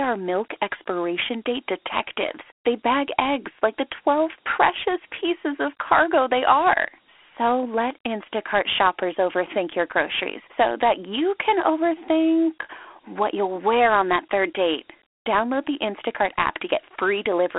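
Dialogic VOX ADPCM coding runs through the whole speech clip: each sample is squeezed into a 4-bit adaptive step, leaving a gritty hiss riding on the voice, which fits 32 kbps at 8,000 samples a second. The phone-line band sits between 300 Hz and 3.4 kHz, with nothing above 3.8 kHz.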